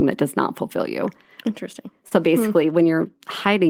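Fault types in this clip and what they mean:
Short concealed packet loss: at 2.07 to 2.13 s, just before "hmm basically", about 40 ms of speech arrived too late, and the receiver bridged 34 ms by extending the preceding sound into a brief smear, unlike the abrupt silence of an unconcealed dropout.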